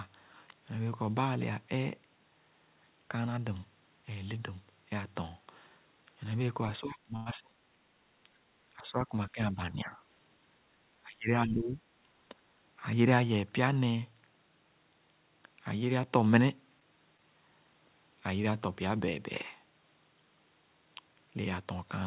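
From 6.8 to 7.56 s the level drops sharply, by roughly 30 dB at its deepest, and about half a second is affected. This is speech suppressed in double talk, likely caused by the far side talking at the same time. The echo canceller could not separate this talker from its own loudspeaker echo, so it turned everything down. Unlike a stall, the sound is removed or thinned rather than held.

Inside that stretch, from 7.16 to 7.28 s, comes a short stall from a late packet. The jitter buffer ran dry, and the last sound was stretched for 98 ms until the packet arrived. Nothing is lost, and playback resumes from the same point. You hear a sound held too long, not a gap.

The suppression returns three more times. From 8.77 to 9.14 s it is a milder dip of about 10 dB. From 9.32 to 9.91 s it dips about 15 dB. From 11.04 to 11.82 s it drops about 20 dB over roughly 0.7 s, a longer stretch. Its uneven shape tells it apart from the steady 4 kHz top end of the G.711 call path.

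At 17.17 s a second, tiny stall holds the sound for 18 ms, and about 10 ms is then trimmed as playback catches up. It is a brief smear rather than a dropout.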